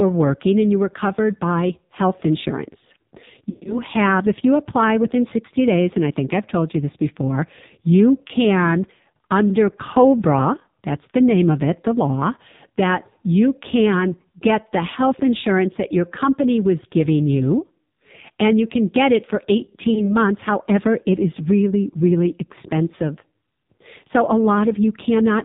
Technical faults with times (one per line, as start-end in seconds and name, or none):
0.00-25.45 AMR narrowband mobile codec
3.50-3.76 lost AMR speech frames
8.28-8.33 lost AMR speech frames
19.94-20.16 lost AMR speech frames